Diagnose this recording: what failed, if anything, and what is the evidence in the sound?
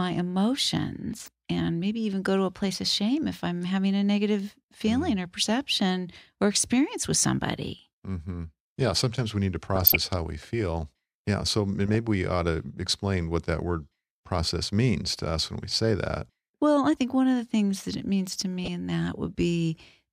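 The failure is at the codec stage, in the broadcast reception chain. DAB burbling breaks through the speech four times: 1.18 to 1.28 s, 9.75 to 10.01 s, 11.86 to 11.95 s, and 18.59 to 18.68 s. Each burst hits 10 to 13 frames. Weak reception lets bit errors slip past error correction into the MP2 data. Corrupted samples put short blips of noise into single sub-bands, and corrupted scale factors make sub-bands jump in level for up to a frame. The density suggests a bit error rate of a few tenths of a percent.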